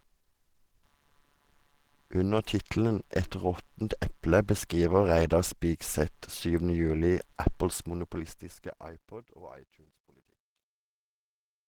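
Computer activity noise runs throughout: buzzy pulsing near 150 Hz, roughly 40 dB below the speech, from processor or peripheral load disturbing the audio ground. The speech is also hoarse and grainy with plainly audible artefacts, likely Opus compression in its hybrid mode at a low bitrate near 16 kbps, with bandwidth still reaching about 20.3 kHz. From 7.67 s, during the fade-out, truncation distortion on the fade appears. The fade keeps too few bits, consistent with about 11-bit resolution and no dither, so the tail turns gritty, worst from 9.18 s to the end.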